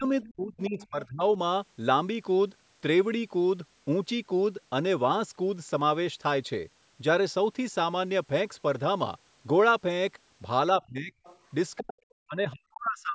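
A speech recording from a call, band-limited by the call's microphone processing to nothing above 8 kHz. It shows speech suppressed in double talk. The talker's level dips at 0 to 0.05 s, 0.33 to 1.22 s, 10.79 to 11.12 s, 11.79 to 12.04 s, and from 12.25 s to the end. The early dips are smaller, around 10 to 25 dB. The later ones go much deeper, near 30 to 40 dB, and nearly cut the speech out. The likely cause is an echo canceller that could not tell the talker from loudspeaker echo while both sides spoke, so it turned everything down. There is also the other side's voice leaking through. Faint scraps of a second voice appear at 0.22 to 0.32 s, 0.67 to 0.87 s and 11.24 to 11.38 s. They sit roughly 20 to 30 dB below the speech. They likely come from the device's loudspeaker, picked up by the microphone and not fully cancelled.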